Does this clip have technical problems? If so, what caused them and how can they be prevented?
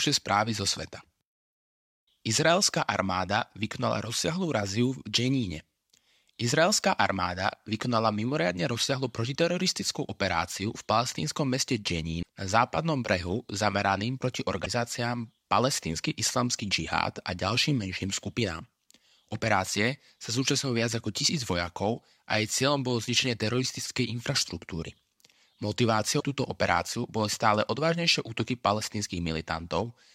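Yes. The speech has three short bursts of damaged data in a compressed stream, at 12.19–12.27 s, 14.62–14.67 s and 26.16–26.23 s, each heard as a brief chirp or blip. In each spot, bytes in the encoded stream were lost or overwritten, so the decoder misread those frames, lost sync and had to hunt for the next valid frame header before playback resumed. Prevention: carry the stream over a transport with error checking and retransmission, and verify file integrity with checksums after transfer or storage.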